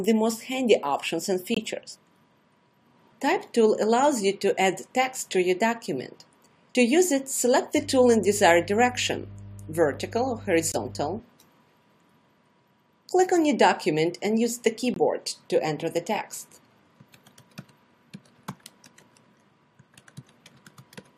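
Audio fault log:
1.54–1.58 s, 10.72–10.76 s and 14.94–14.98 s, corrupt frame muted: Each time the sound drops to sudden silence for about 40 ms, then resumes on schedule. Damaged bits in the compressed stream made the decoder reject the data there, so the player filled the gap with silence. The holes start abruptly because whole frames vanish at once. Timing is kept, so nothing after each gap shifts. The last hole is as short as the others but points to several small frames lost together.
7.76–11.19 s, mains hum: A steady low 50 Hz tone sits under the sound, about 20 dB below it, with some low harmonics. Power-line current leaked into the signal path, most likely through a ground loop or a nearby transformer. It sounds like a constant drone because the mains frequency never changes. The hum stops at 11.19 s.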